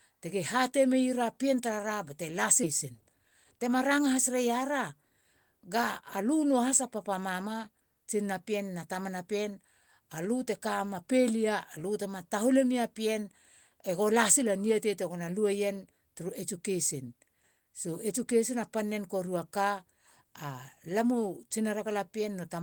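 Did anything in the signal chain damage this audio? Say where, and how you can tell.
Yes, both faults come from the network and jitter-buffer stage. At 2.63 to 2.65 s there is a skip ahead. Roughly 0.7 s of speech is simply missing, and the two sides are butted together with no fill and no silence. This happens when a stretch is discarded while later audio is already queued. On a waveform the envelope jumps abruptly. On a spectrogram, formant tracks break off and restart at unrelated positions with no gap between them.

Right after that, from 2.85 to 4.44 s, a jitter buffer speed-up runs the speech at about 107% of normal rate while the pitch stays the same, so it sounds slightly hurried. The buffer was draining excess delay by cutting many short pitch-period-sized pieces, about a tenth of a second in total. On a spectrogram the harmonic spacing is unchanged, but syllables are compressed in time. 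The waveform shows tiny, repeated splices at period boundaries.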